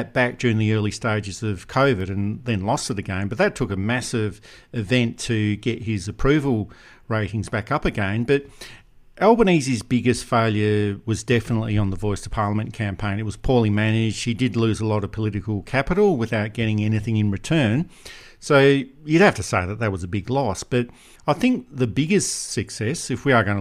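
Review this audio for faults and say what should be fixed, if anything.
Bit error spike at 2.00 s, between "the early stages of" and "and then lost it": one flipped bit jumps a single sample to about -23 dBFS, giving a sharp broadband tick. Protect storage and digital links with error checking or ECC memory so corrupted samples are caught and corrected.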